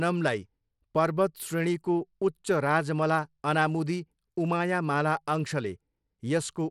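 Speech, likely sent through Bluetooth SBC compression, which fits about 96 kbps. Throughout, nothing remains above 17 kHz, and coarse sub-band quantisation leaves plainly audible grit.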